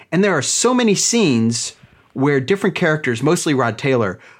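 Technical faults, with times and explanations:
Nothing technical goes wrong anywhere in this speech recording, so there's nothing to flag here.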